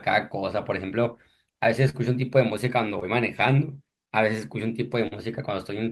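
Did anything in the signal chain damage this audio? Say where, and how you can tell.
Yes, short concealed packet loss on the network: 40, 20 and 40 ms gaps at 1.89, 3.00 and 5.07 s, patched by decoder extrapolation and heard as brief smears.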